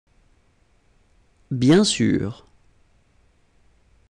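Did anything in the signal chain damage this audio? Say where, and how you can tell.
No, nothing in the signal chain damaged this audio. Listening across the whole clip, no stage from capture to playback leaves any audible mark on the sound.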